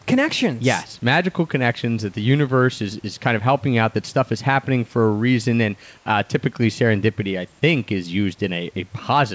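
From 5.98 to 6.06 s, between "for a reason and" and "typically serendipity I think", the room background gives way to a steady, featureless hiss about 6 dB quieter, likely comfort noise in place of the background after transmission paused. A spectrogram shows an 80 ms smooth, textureless band; the waveform dips slightly.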